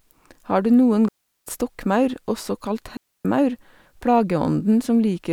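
At 1.09 s and again at 2.97 s the speech drops into clean near-silence, about 380 ms then 280 ms, with no noise burst either side. That's a digital wireless dropout: the receiver lost too much data and muted quickly.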